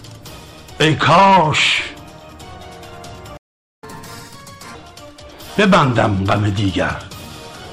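The audio cuts out at 3.37 s and stays silent until 3.83 s, a gap of just under half a second. That's a playback stall, most likely the player running dry on data or its thread getting blocked, so nothing reaches the output until it recovers. Right after, from 3.83 to 4.75 s, you get catch-up at higher speed. The player is chewing through its backlog at 1.5 times normal rate by resampling, so everything comes out faster and noticeably higher, roughly seven semitones up, before settling back to normal.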